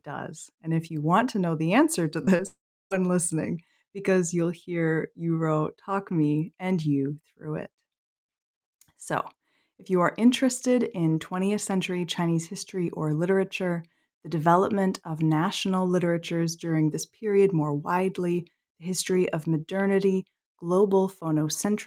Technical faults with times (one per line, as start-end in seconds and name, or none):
2.25-2.41 short concealed packet loss
2.47-2.92 long network dropout